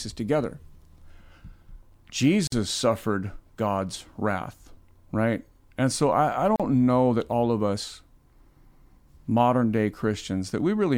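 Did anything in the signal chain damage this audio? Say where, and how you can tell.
Yes, at the codec stage: a gap at a join of encoded pieces. The speech drops to silence at 2.47 s for about 49 ms, and at 6.56 s for about 37 ms. The edges are smeared by the codec. Separately encoded segments were joined untrimmed, leaving each segment's start delay and end padding.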